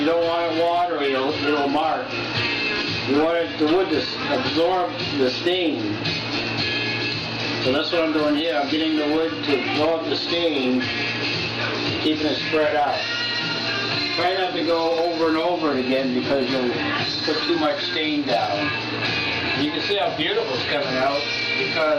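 A single compressed frame was skipped at 19.53 s: one frame of the encoded stream was either missing from the file or rejected by the decoder as damaged, so it was never played. The audio jumps ahead by about one frame, roughly 20 ms, which fits a frame length of about 23.2 ms. At the join the sound lurches forward, leaving a short discontinuity, either a brief smeared blip or a hard click depending on how the codec joins frames.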